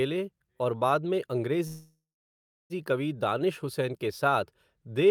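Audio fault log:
1.67–2.73 s, call audio freeze: the last sound stretches into a fading buzz, goes silent for 0.71 s, then speech resumes intact, 1.03 s late; likely an emptied jitter buffer. Spectrogram shows horizontal streaks dying into a blank band; waveform tapers to flat.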